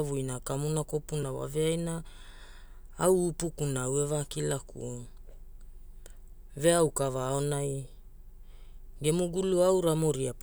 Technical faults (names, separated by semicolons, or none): block of digital silence